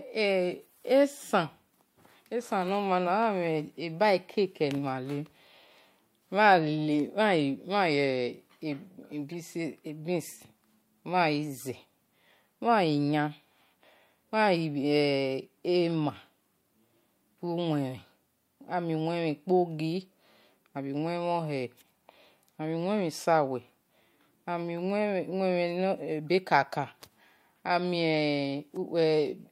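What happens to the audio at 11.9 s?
Nothing goes wrong at 11.9 s; the speech carries straight through that moment with no dropout, click, glitch or other break.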